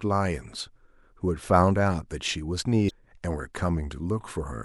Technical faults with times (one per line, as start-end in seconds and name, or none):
2.86-2.91 damaged data in a compressed stream